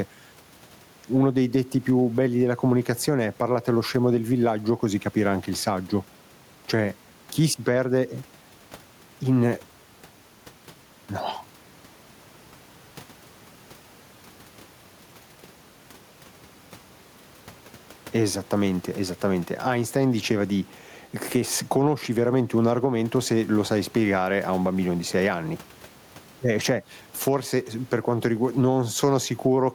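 A speech recording with gain pumping from start to finish. The room noise sits about 37 dB below the voice. The level swing is roughly 10 dB. Loud and quiet passages end up squeezed close together, so the sound feels flattened. The likely cause is microphone gain set far too high, with a fast limiter or compressor clamping down on each loud moment.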